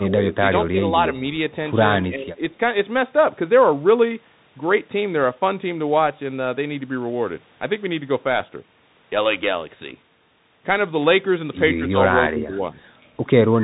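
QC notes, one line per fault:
Throughout, Bluetooth CVSD headset codec: nothing above 3.8 kHz survives, and one-bit slope coding at 64 kbps leaves granular hiss and scratchy sibilants where the step size lags.
0.0–0.17 s, 0.71–0.8 s, 2.02–2.43 s, 12.3–12.62 s, 13.5–13.63 s, speech suppressed in double talk: the speech dips by about 10 to 25 dB, likely an echo canceller turning the talker down while the far side spoke.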